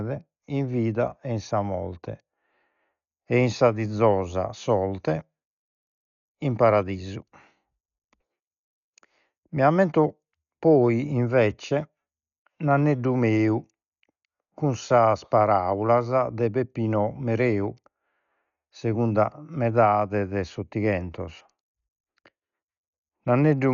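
Likely heavy Dolby Digital compression, fitting a bitrate near 48 kbps, cuts everything above 7 kHz throughout, so the speech sounds dull with rough, fluttering noise.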